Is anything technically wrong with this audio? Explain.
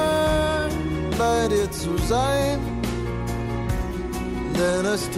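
No, no technical faults heard.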